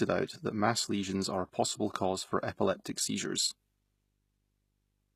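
Right from the start there's video or display buzz underneath the speech, a faint 50 Hz field-rate buzz with hash on top and a thin 15.6 kHz line whine, well below the voice. The treble also sounds rebuilt rather than real: s sounds come out gritty and lispy, nothing survives above 14.9 kHz, and the damage is plainly audible, likely HE-AAC compression at something like 20 kbps.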